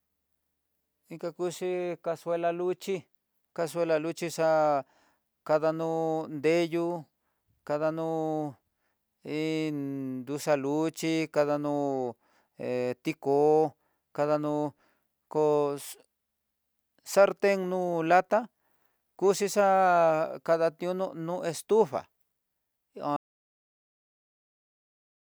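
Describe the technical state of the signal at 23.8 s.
At 23.8 s the speech has hit an audio dropout to silence, running from 23.16 s to the end, likely from lost input while recording continued: the sound is silent, with no room tone left.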